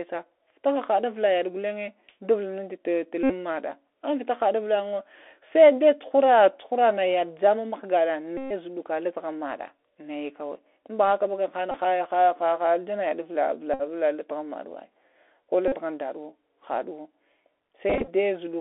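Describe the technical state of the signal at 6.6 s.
At 6.6 s the speech is passing through a Bluetooth CVSD headset codec, which affects the whole clip rather than this moment alone. Each sample is coded as a single up-or-down bit, a rate that fits 64 kbps, with an adaptive step, so loud fast transients outrun it and distort, s sounds turn scratchy, and granular hiss sits beneath. A spectrogram shows energy confined to roughly 300 Hz to 3.5 kHz, with a grainy noise floor between syllables.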